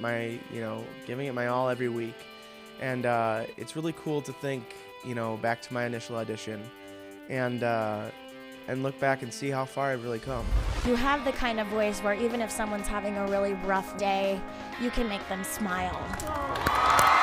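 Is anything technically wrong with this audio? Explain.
No, the signal carries no audible technical faults.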